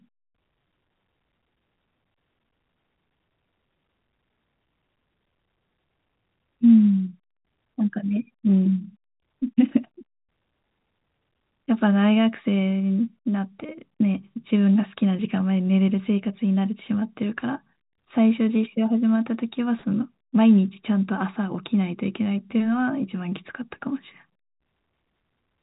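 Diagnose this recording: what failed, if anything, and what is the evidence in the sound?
Nothing in the recording stood out as a failure on listening.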